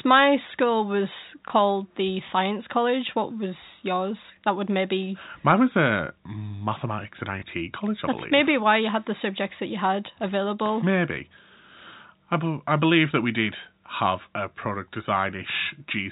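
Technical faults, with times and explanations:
1.48–1.50 s and 7.40–7.42 s, packet loss with last packet repeated: Right after "my school was" and again after "was a mathematics and", 20 ms of audio drops out. The receiver fills each gap by replaying the previous packet, which fits a single lost 20 ms packet. Each single repeat sounds like a small blip. The gaps are single, so no sustained buzz builds up. Both are heard through the narrow G.711 telephone band, with nothing above 4 kHz.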